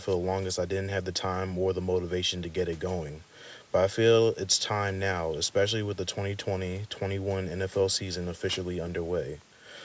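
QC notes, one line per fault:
No faults were found in the speech. It has passed through call microphone processing, so nothing sits above 8 kHz and the lowest bass is trimmed away, as that path normally does.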